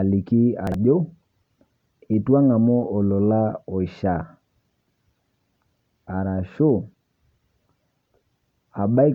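Around 0.67 to 0.74 s there's chunks out of order: one 23 ms chunk lands two chunks late, so the speech briefly jumbles.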